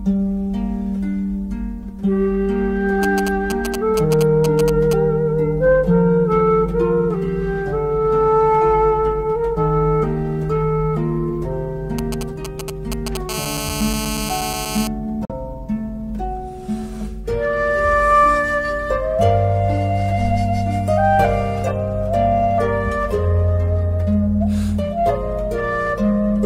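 From 3.03 to 4.93 s, and again from 11.99 to 13.17 s, a galloping dit-dit-dit of ticks and short raspy buzzes repeating at 217 Hz cuts across the audio, only a little quieter than the programme at first and noticeably quieter the second time. These are GSM signalling bursts: a nearby 2G phone exchanging short groups of radio bursts with its network, which the audio circuit rectifies into sound.

From 13.29 to 14.87 s the pattern turns into a continuous hard, harmonic-rich 217 Hz rasp at about 7 dB below the signal. This is GSM phone buzz from a nearby 2G phone, now transmitting steadily on a call.

At 15.25 s the sound snaps to silence through a 3 ms fade for about 43 ms, then returns. This is a digital broadcast dropout, consistent with one corrupted frame being muted and its content lost.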